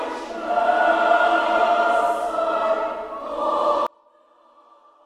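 At 3.87 s the sound collapses and stays faint until the end at 5.05 s. The level falls by about 34 dB. This is one channel inverted, likely the cause. One stereo channel has its polarity flipped. When the two channels are summed to mono, everything they share cancels out. Only the difference between them survives. What remains is a faint trace of the sound.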